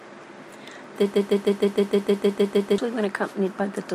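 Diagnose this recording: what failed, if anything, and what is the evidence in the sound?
Broken-record loop, 1.14 to 2.78 s: a 155 ms slice of speech repeats eleven times, likely a stalled playback buffer resending its last fragment.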